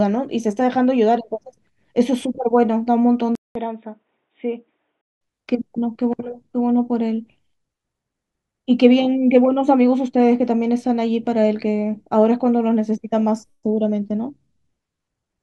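At 3.35 s the speech drops out for 200 ms. It returns dull and boxy, with nothing above 3.8 kHz, a little quieter, and with a faint new noise floor well beneath it. This lasts until 5.21 s, when the full, brighter sound comes back. The likely cause is the input switched to a poorer device. The system moved to another microphone or a headset call profile, whose narrower band and different noise come through until it switches back.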